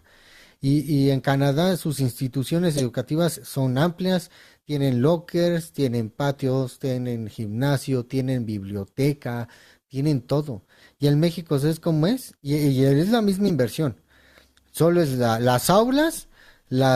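A sharp chirp-like burst at 2.73 to 2.82 s, loud, and a shorter, quieter blip at 13.48 to 13.51 s are corrupt frames decoded: damaged compressed data was played anyway, spraying energy at wrong frequencies across what sounds like a few frames each.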